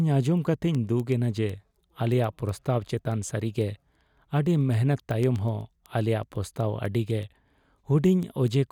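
From 0.12 to 8.60 s, word clock ticks sound through the speech about every 0.15 s, as an unlocked receiving clock slips one sample each time.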